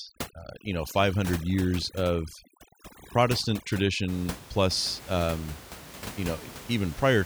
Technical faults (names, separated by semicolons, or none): overdone noise removal